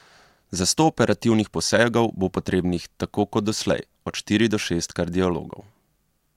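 Nothing technically wrong turns up in this speech recording; there's no fault here to point to at any moment.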